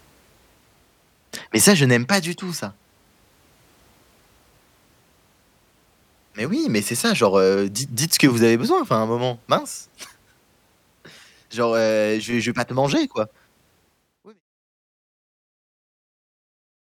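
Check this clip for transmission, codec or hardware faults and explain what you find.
No transmission, codec or hardware faults are evident in this speech recording, and the gradual fade-out beginning around 13.5 s and reaching silence at 14.42 s is ordinary editing with no click or hard edge.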